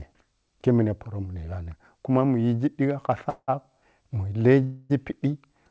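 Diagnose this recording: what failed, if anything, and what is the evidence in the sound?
That's a call audio freeze, twice: 3.29 to 3.50 s the sound smears into a fading buzz with a short silence, then 4.64 to 4.92 s. Speech resumes exactly where it stopped, so it's delayed, not lost. Likely network stalls emptied the jitter buffer.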